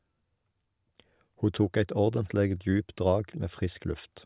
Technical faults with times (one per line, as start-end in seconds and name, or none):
none